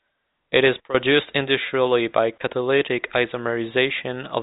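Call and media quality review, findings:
No call or media quality findings to report for this speech.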